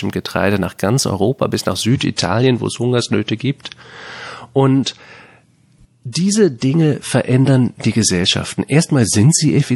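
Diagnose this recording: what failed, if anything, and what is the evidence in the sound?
Network-side trouble here: an adaptive stream at a lower bitrate. At 1.91 s the speech abruptly goes duller, losing everything above 11.5 kHz and turning swirly until the end, with no gap. That fits the player switching from roughly 128 kbit/s MP3 down to 48 kbit/s when throughput sagged.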